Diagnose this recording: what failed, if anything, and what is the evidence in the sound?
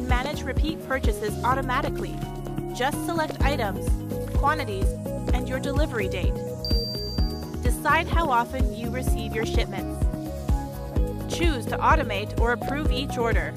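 A sharp click at 4.69 s marks dropped samples: a fraction of a millisecond likely lost in the driver or buffer, making the waveform jump.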